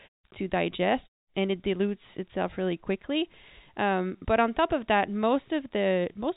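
From 1.22 to 1.34 s, a 120 ms pause in the speech loses its real background, about 40 dB below the loud parts, to a flat, detail-free hiss about 16 dB quieter: comfort noise in place of the background, likely synthesised during discontinuous transmission.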